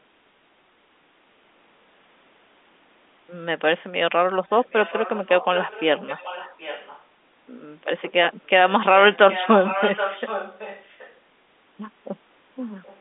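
Echo leak at 4.49–7.03 s and 9.12–11.15 s, then faint scraps at 12.62–12.70 and 12.86–12.99 s: a copy of the speech returns 774 ms late, roughly 10–15 dB down, later much quieter. This is likely a far-end loudspeaker pickup that the echo canceller missed.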